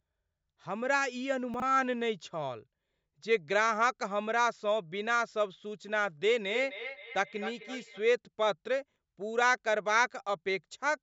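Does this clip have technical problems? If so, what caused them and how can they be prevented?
Yes. At 1.54 to 1.62 s and again at 8.92 to 8.96 s there are chunks out of order. A 20 ms slice turns up late, about 60 ms behind at the first spot and 20 ms at the second, so the sound briefly jumbles at the hard joins. Keeping a properly ordered jitter buffer on the receive or recording path prevents this.

From 6.44 to 8.04 s there's feedback echo between two devices. Two devices in the same room are on the call, so one plays back what the other's mic sent and that mic catches it again. The sound comes back roughly every 300 ms, peaking at about 11 dB below the main signal. Muting or leaving the call on all but one device in the room stops it.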